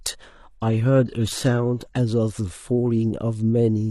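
From the very start to about 2.0 s, you're hearing an adaptive stream starting at a low bitrate. The speech sounds dull up top, with a synthetic, swishy treble and stronger codec smearing, which fits an HE-AAC rendition around 16 kbit/s. The player grabbed that cheap version to get going fast, then switched up once it had sized up the connection. At 2.0 s the quality jumps cleanly, pointing to roughly 96 kbit/s AAC-LC, with no gap.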